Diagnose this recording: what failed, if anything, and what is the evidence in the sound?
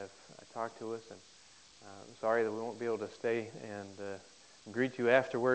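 Nothing failed in this recording, and the only evidence in the sound is the band ending at 8 kHz, which is what its G.722 call path does when working normally.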